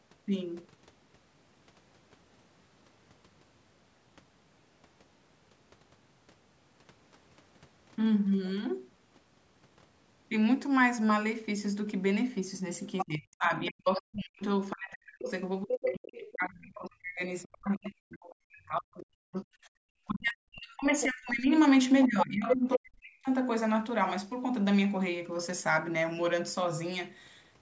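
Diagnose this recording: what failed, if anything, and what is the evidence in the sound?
The other side's voice leaks through at 12.97–13.06 s, 14.71–15.75 s and 22.01–22.78 s. A second talker sits only about 5 dB under the speech in the first two spots and at roughly equal level in the third. This is call processing: the far end played from the loudspeaker and reached the microphone, and the echo canceller likely failed to subtract it, so residual echo passes into the outgoing signal.

Speech is suppressed in double talk from 13.03 to 19.5 s, 20.07 to 21.49 s and 22.07 to 23.29 s, overlapping the leak episodes. The talker's level dips by as much as around 40 dB, in pieces adding up to about 5 s in the first stretch, 1.5 s in the second and 1 s in the third. With both sides active, the canceller's suppressor likely treated the near-end talker as echo and attenuated everything together.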